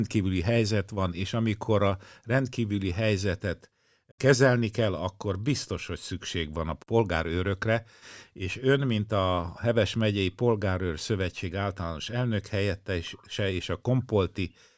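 No technical faults are audible.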